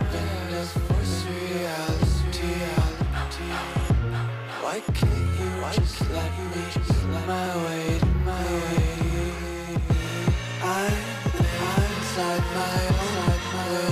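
Throughout, a doubled audio track, likely a slower second capture or two out-of-step edited copies, repeats everything dry about a second later, roughly 5 dB quieter.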